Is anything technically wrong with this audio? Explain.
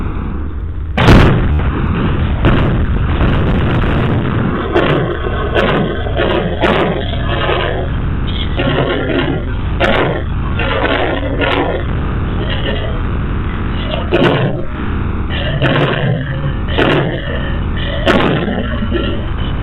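Yes. At 1.53 to 1.59 s, a brief buzzing stutter repeats one tiny slice: Bluetooth stutter, with about 67 ms of packets lost and the last buffer replayed.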